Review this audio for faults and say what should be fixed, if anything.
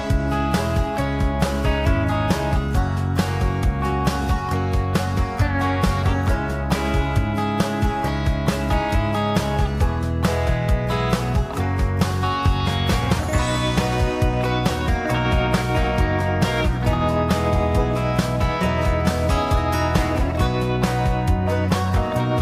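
Nothing in the audio needs fixing. No faults can be heard at any point, so no changes are called for.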